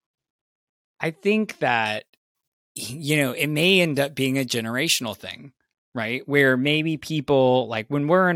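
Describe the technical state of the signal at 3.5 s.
At 3.5 s the speech has pre-emphasis left on, from 1.86 to 5.15 s. The treble lift applied for transmission was never undone, leaving highs about 13 dB strong at 10 kHz relative to 1 kHz. The sound is thin, bright and sibilant. Unlike a fixed treble shelf, the boost climbs steadily from roughly 2 kHz upward, which fits the 75 µs FM curve.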